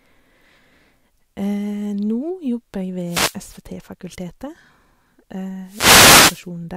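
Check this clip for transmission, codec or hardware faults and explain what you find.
Two wireless microphone noise hits: 3.05 to 3.38 s, just after "jobber jeg", and 5.64 to 6.48 s. The analogue FM radio link fades as reflections cancel, so receiver noise rises over the speech as a swish of static.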